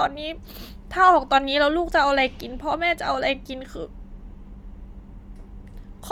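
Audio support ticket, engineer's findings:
Breathy, grainy edge on the speech throughout, upper band sounding noise-filled rather than detailed. Likely Bluetooth LC3 compression: the transform codec zeroing upper spectrum and substituting noise, damage plainly audible, consistent with roughly 48 kbps and 10 ms frames.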